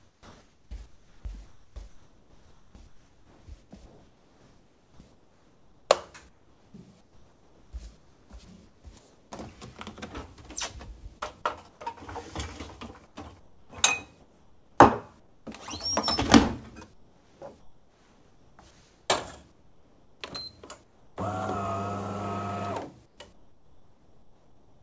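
From the start to 9.32 s, the real background gives way to steady, featureless comfort noise in place of the background, likely from discontinuous transmission filling the pauses. Inside that stretch, at 8.45–8.48 s, a brief bit of sound gets dropped by the voice detector, which likely mistook it for background and stopped sending. At 11.18–11.24 s there's a short concealed packet loss, about 30 ms missing, smeared over by continuing the last sound. Comfort noise then fills 11.18–11.81 s and again 13.07–15.47 s, where at 13.70–13.73 s the onset is clipped by the voice detector, so the sound starts abruptly. The flat noise returns at 16.94–21.17 s and from 23.06 s to the end. Through the whole call path, nothing comes through above 8 kHz, which fits G.722 at 64 kbps.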